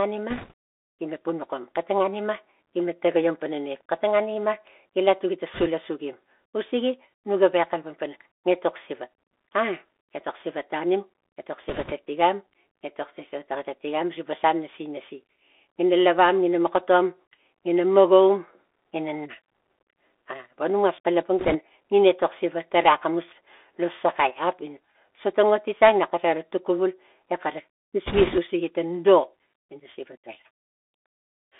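Bluetooth CVSD headset codec, throughout: the speech passes through a one-bit delta modulator, which fits a 64 kbps link, whose adaptive step tracks the waveform. The band sits near 300 Hz to 3.5 kHz. Fast, loud high content outruns the step, making sibilants scratchy over a plainly audible granular hiss.

Bit errors on a Bluetooth voice link appear at 0.30–0.52 s, 5.54–5.68 s, 11.69–11.93 s, 21.39–21.57 s and 28.06–28.40 s. Flipped bits each carry equal weight, grow with the speech level and fade, so there are no sharp clicks. Instead there is a brief rushing crackle, densest in the final burst, where the error rate climbs to about four percent.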